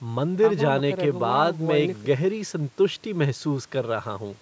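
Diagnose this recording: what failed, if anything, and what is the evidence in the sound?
Nothing in the chain failed: the speech carries the ordinary signature of call microphone processing, with the lowest bass trimmed by its high-pass filter and no content above 8 kHz, and these are expected traits of that stage rather than a fault.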